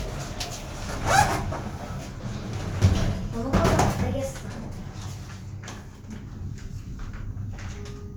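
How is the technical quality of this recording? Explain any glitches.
No technical faults can be heard in this recording.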